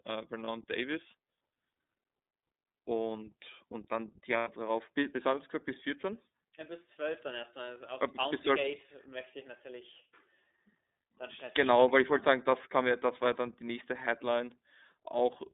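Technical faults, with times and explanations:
throughout: iLBC codec. The speech is confined to roughly 250 Hz to 3.7 kHz and has a plainly audible rough, slightly synthetic texture. Each frame's excitation is coded on its own at low rate, which fits iLBC's 13.33 kbps mode with 30 ms frames.
0.44 to 0.48 s and 4.38 to 4.48 s: lost iLBC frames. The decoder fills gaps of 30 ms and 90 ms by repeating the last pitch cycle mixed with noise, heard as a held, buzzy vowel. Because frames decode independently, the voice is right again almost at once afterwards.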